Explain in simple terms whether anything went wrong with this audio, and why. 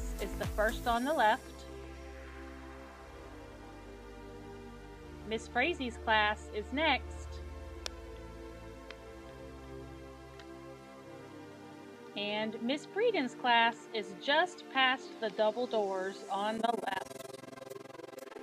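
Near the end, from 16.58 s to 18.43 s, the audio was sliced into long overlapping pieces and rejoined unevenly. This overlap-add ripple makes the loudness dip and swell about twenty times a second, heard as a rough flutter.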